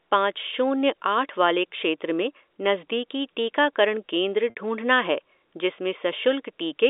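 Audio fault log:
4.50–4.55 s, packet loss with pitch repetition: about 60 ms of the G.711 telephone stream drops out, which fits three 20 ms packets. The receiver repeats the last pitch period to fill the gap, so the speech briefly holds on one steady, slightly buzzy tone before resuming.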